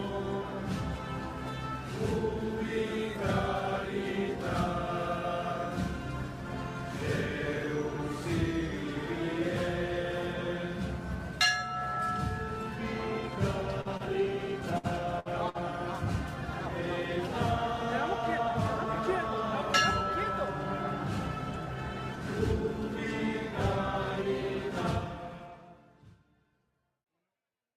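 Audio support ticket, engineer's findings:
Repeated packet loss, robotic sound, 13.81 to 15.57 s. Five gaps, longest 59 ms, patched by repeating prior audio. Choppy texture. Network loss upstream.

Jitter buffer speed-up at 21.51 to 23.49 s (102%) and 25.07 to 25.52 s (110%). Buffer dropped short pitch-period chunks to cut delay. Audio hurried at 110%, pitch unchanged.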